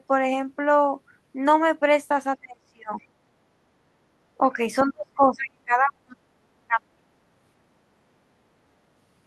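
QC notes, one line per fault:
2.41–7.03 s, speech suppressed in double talk: the level ducks at 2.41–3.02, 4.38–4.59, 4.88–6.16, 6.67–6.8 and 6.97–7.03 s, from a slight dip to a near-dropout of roughly 40 dB around 5 s, likely an echo canceller attenuating the near talker during overlap.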